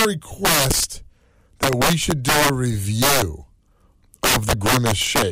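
Integer overflow cracks through the speech from 0.00 to 0.05 s, 0.45 to 0.84 s, 1.63 to 2.50 s, 3.02 to 3.22 s and 4.24 to 5.22 s. The level there runs about 3 to 12 dB past the integer ceiling, and each overshooting peak wraps to the opposite extreme instead of being held. It sounds like harsh, snapping cracks, far sharper than clipping. On the waveform, peaks jump full-scale to the other sign. The spectrogram shows broadband vertical streaks.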